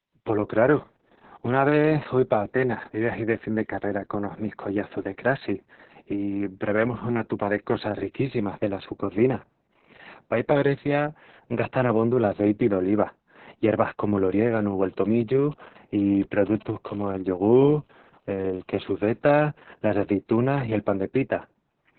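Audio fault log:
throughout Opus voice compression. The speech is narrowband, with nothing above 4.3 kHz, so it sounds muffled and boxed in. Consonants lose their edge and vowels turn hoarse and slightly robotic. The coder is running in its linear-prediction SILK mode and modelling the voice very coarsely. The damage is heavy, which points to a rate near 6 kbps. It uses long 60 ms frames, where each chunk of sound is squeezed into a few parameters.
15.05–16.71 s GSM signalling bursts. A galloping dit-dit-dit pattern of short buzzes cuts in. It sits around 20 dB below the speech. The buzz inside each group repeats at 217 Hz. A nearby 2G phone is exchanging short radio bursts with the network, as it does before a call or text. The audio circuit rectifies those pulses into audible clicks.
16.85–19.03 s GSM phone buzz. Right after the bursts, a steady, hard, raspy buzz at 217 Hz takes over. 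It is rich in harmonics and has nothing to do with the speech. It sits about 33 dB below the speech, so it is quieter than the bursts but constant. The same phone has moved into a call and now transmits in bursts 217 times a second. The circuit demodulates each pulse, and that produces the continuous tone.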